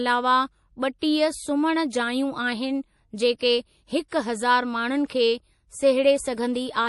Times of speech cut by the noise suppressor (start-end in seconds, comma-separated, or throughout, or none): none